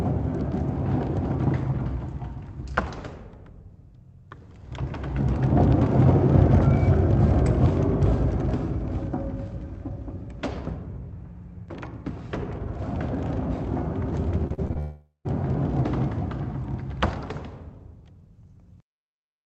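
A recording of everyday sounds turns choppy from 14.47 to 14.77 s, with four short holes (the longest 39 ms) covering about a third of that stretch. This is repeated packet loss: lost packets were patched by stretching the preceding sound, giving a robotic texture. Right after, from 14.79 to 15.27 s, the sound smears into a fading buzz, then goes silent before resuming with that half-second gone, most likely a long network dropout. The audio passed through an Opus call path, whose bandwidth tops out at 8 kHz.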